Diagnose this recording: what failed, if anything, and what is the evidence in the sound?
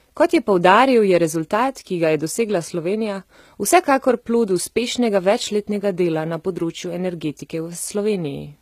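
The failure sits at the codec stage, and the damage is plainly audible across the whole speech clip. The treble sounds synthetic, with s sounds gritty, metallic and lispy, which likely points to HE-AAC compression at a low bitrate near 20 kbps, where band replication fills the treble with copied lower bands.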